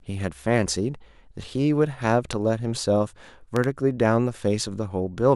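At 2.33 to 2.35 s there's a loud pop, a sharp click jumping about 10 dB over the speech, then a louder double pop at 3.56 to 3.66 s, around 15 dB up. They're likely voltage spikes from static or a switch, riding on top while the talking continues underneath.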